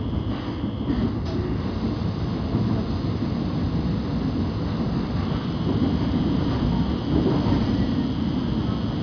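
Nothing technical stands out anywhere in this recording of everyday sounds, so there's no fault to describe.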